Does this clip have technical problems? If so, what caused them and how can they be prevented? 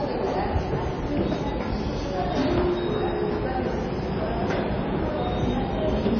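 Yes. MP3 compression runs throughout the clip and is plainly audible. Nothing remains above 6.5 kHz, so the treble is cut off flat, and the sound has a watery, swirling quality where weak frequency components flicker in and out between frames. Transients come out smeared. These are the traits of an MP3 encoder starved of bits, and the likely cause is a very low bitrate, which fits something near 22 kbps. To prevent it, keep the original uncompressed file or encode at 128 kbps or higher.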